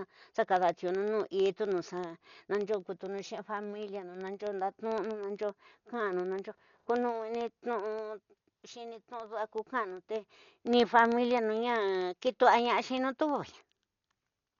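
From the start the speech sounds dull and rough, with nothing above 6.9 kHz, likely Dolby Digital compression at around 48 kbps starving many frequency lines. Then, from 0.05 to 14.51 s, periodic USB or driver dropouts blank a sliver of audio every 64 ms, about 200 times, giving steady ticks.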